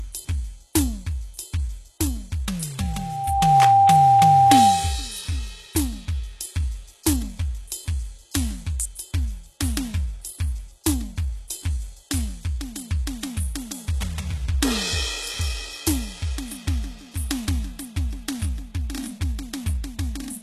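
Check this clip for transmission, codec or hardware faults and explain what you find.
Two faults are present in this music clip: a feedback squeal partway through and a limited bandwidth that runs the whole length.

From 2.79 to 5.09 s there is a loudspeaker feedback squeal. A microphone is picking up its own loudspeaker, and at 790 Hz the loop gain exceeds one, so that tone feeds itself. Over roughly 0.7 s it swells to around 10 dB above the music. On a spectrogram this appears as a single bright horizontal line at 790 Hz. On the waveform, the envelope visibly bulges during that span.

Throughout the clip, there is no content above 12.3 kHz, which takes the air off the top of the music. The likely cause is low-bitrate audio saved at a high bitrate. The MP3 file sits at a high rate, but the ceiling fits an earlier very low-bitrate encode whose losses the re-encode cannot restore. A spectrogram shows a flat, hard ceiling at 12.3 kHz across the whole file.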